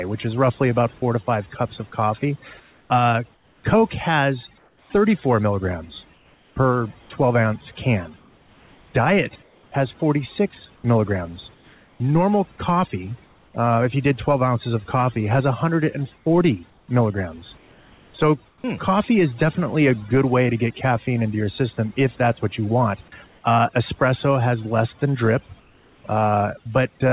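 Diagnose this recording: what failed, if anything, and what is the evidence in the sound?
Call processing on the capture side applied overdone noise removal, with the suppressor set far too aggressive for the room noise, which sits about 35 dB below the speech. Throughout the clip, frequency bands near its noise estimate are pulled down or switched off, and the quieter parts of the speech go with them. The background collapses to near silence scattered with twinkling specks.

At 0.98 to 1.02 s, the sender's voice activity detection likely misjudged live sound as background and stopped transmitting. This is sound dropped by the voice detector. About 20 ms of real audio is missing, and the receiver fills the 40 ms gap with synthetic comfort noise. The result is a brief break where the signal flattens into steady hiss before the detector triggers again.

In four places the real background gives way to comfort noise in place of the background, likely from discontinuous transmission, where the receiver synthesizes spectrally shaped noise during pauses. 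The first runs from 2.6 to 13.54 s, between "five cups of coffee" and "uh if you did". The second runs from 16.18 to 18.64 s, ending at "hmm coffee is definitely". The third covers 23.28 to 23.44 s, after "that's what you want", at unchanged level. The last, from 25.6 to 26.04 s, comes in about 3 dB quieter. In each, detailed ambience becomes featureless steady noise.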